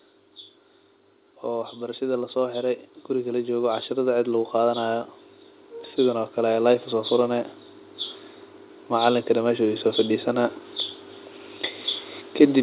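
From 1.45 s to 5.11 s the speech and the room noise behind it swell together, climbing steadily by about 8 dB over those 3.7 seconds, so the background becomes louder as the voice does. This is automatic gain rising: the gain control judged the incoming level too low and kept pushing its amplification up. Everything heard through the call path, which carries nothing above 4 kHz, gets louder at once.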